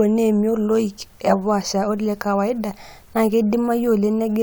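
No technical faults are audible.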